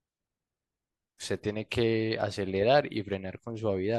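No technical faults can be heard anywhere in the speech.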